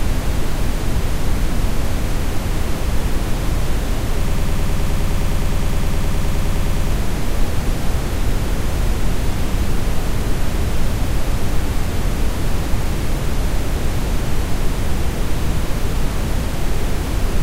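From 4.28 to 6.92 s, a broken-record loop: a 104 ms fragment repeats back to back, likely a stalled player resending its last buffer. The missing audio is lost.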